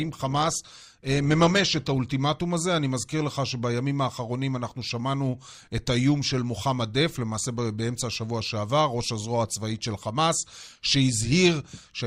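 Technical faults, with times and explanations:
0.0 to 2.0 s, adaptive stream starting at a low bitrate: for the first two seconds the speech is dull and thin at the top, with stronger codec smearing. At 2.0 s it abruptly becomes clearer with no gap. The player opened on a cheap, low-bitrate rendition so playback could begin at once, then switched up after gauging the connection. The before-and-after quality fits an Opus stream stepping from roughly 24 kbit/s to 64 kbit/s.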